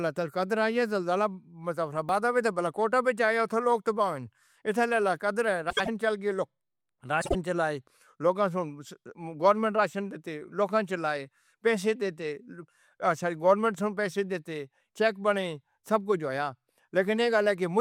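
At 2.09 s there is a small jump in the speech. Nothing falls silent. The sound simply skips ahead. Roughly 10 ms of audio is missing, and the two sides butt together. This is likely a dropped buffer (overrun). The program failed to read its samples in time, and the hardware wrote over them. That lost piece never reached the recording.

From 5.70 to 5.89 s, just before "چل کے", the speech turns into a brief garbled flutter. These are frames out of order. Two neighbouring blocks, each 72 ms long, play in swapped order. That fits runs of three frames each. It happens again from 7.21 to 7.35 s, with 48 ms blocks. That points to two frames per block. In both places the stretch is scrambled, but no time is lost.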